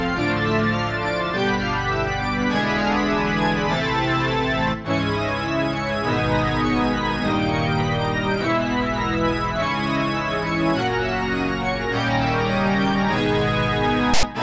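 At 14.14 s, a harsh burst of static cuts in and stops dead at 14.23 s. This is file tags played as audio. A block of text metadata was read as samples. Its byte values make a loud rasp that sits off to one side, with hard edges.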